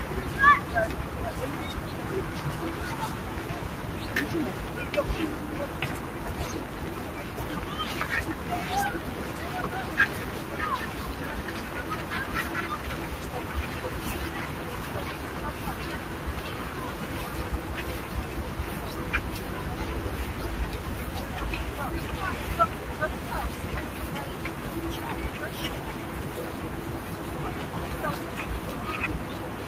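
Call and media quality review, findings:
Noise suppressor applied to sounds, throughout: sustained tones and tails duck by around 5 dB while attacks pass. Speech-tuned suppression treating steady content as noise, not level-wide AGC pumping.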